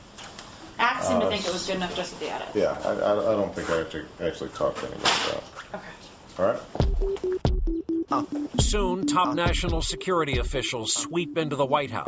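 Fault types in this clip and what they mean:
No technical faults can be heard in this audio. Nothing in it calls for an entry under any fault type.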